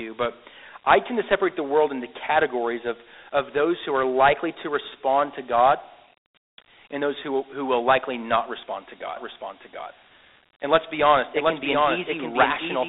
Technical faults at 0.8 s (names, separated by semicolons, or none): Dialogic VOX ADPCM